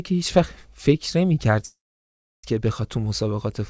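Speech, with a call audio freeze from 1.66 to 2.45 s, likely held-up packets draining the jitter buffer: a brief fading fill, then about 0.69 s of flat waveform and blank spectrogram before speech resumes intact.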